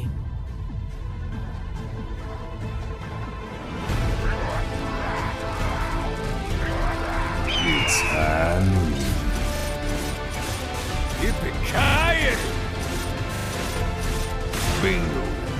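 Playback data arrived late four times, so the last buffer of audio was replayed, giving hard-edged stutters at 6.28, 9.56, 11.84 and 13.36 s, each fitting a 40 ms repeated buffer.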